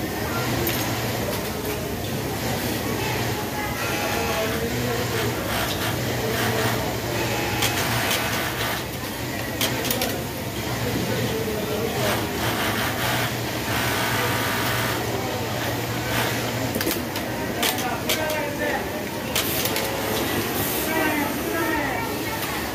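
From start to finish, a block size mismatch (truncated) puts a steady 43.1 Hz buzz on the sound. The tail of each block is discarded, which fits 1024-sample blocks. Unlike padding, no silent gaps appear, and pacing and pitch stay normal.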